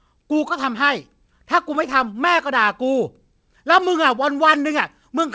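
No technical faults are audible.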